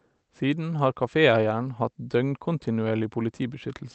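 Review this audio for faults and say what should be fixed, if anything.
Nothing needs fixing: the speech carries the ordinary character of a call path, with the high end stopping around 8 kHz as an Opus call setting would give it, and no fault is present.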